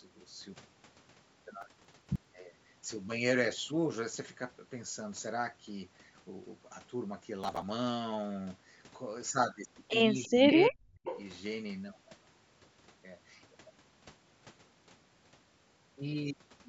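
Processor overload crackle appears from 1.61 to 2.25 s and again from 7.44 to 7.62 s. The processor kept missing its deadlines for short audio buffers. Missed stretches were skipped, not filled. The gaps fit buffers of about 10 ms, with dozens lost in the first burst and around fifteen in the second. Each burst sounds like gritty, tearing crackle that stops when the load passes.

From 10.24 to 10.30 s, a brief echo leak comes back. It is a copy of the voice delayed by 346 ms, about 35 dB below the speech. It is most likely left over from a loudspeaker whose echo canceller did not remove it.

Speech suppressed in double talk follows, from 10.27 to 11.06 s. The voice dips for roughly 700 ms in all. At its deepest it falls by about 35 dB. The likely cause is the echo canceller turning down this side's talker along with the loudspeaker echo.

A second echo leak runs from 11.04 to 11.22 s, with the same 346 ms delay. 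This one is louder, about 15 dB below the speech.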